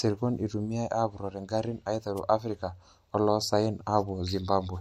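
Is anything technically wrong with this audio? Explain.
Yes. At 2.16 to 2.20 s the speech is hit by a wireless microphone noise hit lasting about 37 ms. The analogue FM radio link from the microphone faded for a moment as reflected copies of the signal cancelled the direct one at the receiver. With the carrier that weak, the receiver's own noise rose up through the audio, heard as a short swish or burst of static laid over the speech.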